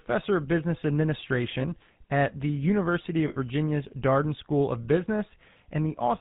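Speech passed through the GSM full-rate codec sounds buzzy and gravelly throughout, consistent with roughly 13 kbps coding; a spectrogram shows nothing above 4 kHz. From 3.28 to 3.37 s, lost GSM frames leave a rough metallic ring for about 80 ms, fitting four dropped frames, visible as a smeared block in the spectrogram and a held waveform.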